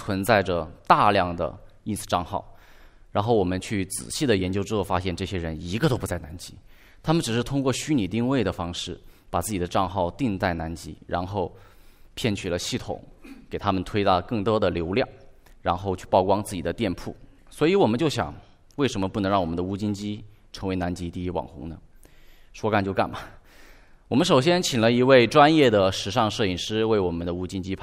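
Nothing technical stands out in this bit of speech; there's no fault here to point to, so there are no times or causes to give.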